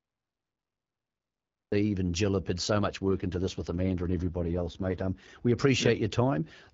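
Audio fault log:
0.00–1.72 s, cut-off start: The clip opens on digital silence, and at 1.72 s the speech begins abruptly in the middle of a sound, with no natural attack or fade-in. This happens when the recording or stream began late and caught the sound already underway. On a waveform, a flat line gives way to signal at one instant; a spectrogram shows a blank region ending in a hard vertical edge.
3.10–5.28 s, AMR rate drop: Just after "have put so much", the AMR-WB coder falls from 12.65 kbit/s, where it adds only light damage, to 6.6 kbit/s. That is the behaviour of a weak radio link, where the network trades speech bits for error protection. The speech turns rough, raspy and synthetic, then recovers. The bandwidth stays the same and there is no gap, so the waveform looks continuous; the spectrogram shows smeared harmonics and a noisier texture across the segment.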